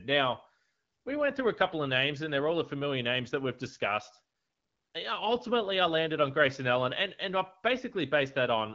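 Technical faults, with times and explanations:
Nothing here counts as a fault: the speech comes through an AMR wideband (HD Voice) codec at a rate that fits 12.65 kbit/s, and the top end stops at about 7.4 kHz, which is just how that wideband path is built.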